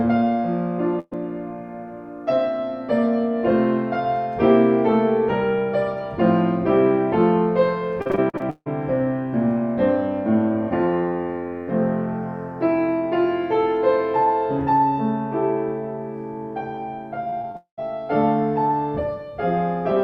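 At 0.99 to 1.13 s a burst of packet loss removes about 120 ms of audio: the last sound is stretched and faded, then about 20 ms of silence, and on a spectrogram the bands run flat and smeared before a thin blank column. From 8.02 to 8.68 s repeated packet loss produces choppy, robotic sound, with eight gaps (the longest 156 ms) patched by repeating earlier sound, covering about half the span; a waveform shows a stuttering pattern of copied fragments and dips, and the spectrogram shows repeated blocky segments. A milder stretch of the same robotic packet loss runs from 17.30 to 17.82 s, with four short gaps, none over 27 ms, concealing about 13% of that time, visible as brief notches and smears. Inside it, from 17.56 to 17.79 s, the sound is drawn out and fades and then goes quiet for about 110 ms, losing about 220 ms of material. This is likely a long network dropout, and it shows as a smooth decaying tail followed by an almost empty gap in the waveform and spectrogram.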